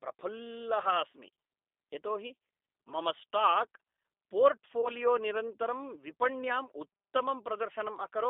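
The whole clip passes through a G.729 codec at 8 kbit/s, rebuilding the speech from a vocal tract model and a few pulses per frame within a 300 Hz to 3.7 kHz line band. The result is intelligible but audibly rough, thin and synthetic throughout.

At 4.81 s, VoIP packet loss concealed by the speech codec begins. About 20 ms of audio went missing, consistent with two 10 ms frames, and the decoder extrapolated from its last pitch and filter state. The speech smears into a brief buzzy tone or coloured noise that fades, and stays weakened until about 4.90 s.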